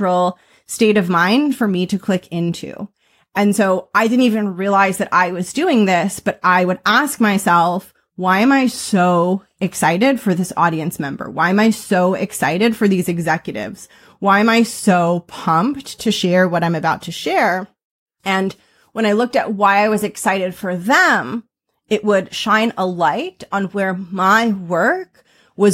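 Nothing here needs flagging: no technical faults turn up anywhere in this speech recording.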